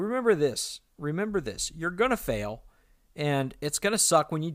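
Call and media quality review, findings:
No audible faults found.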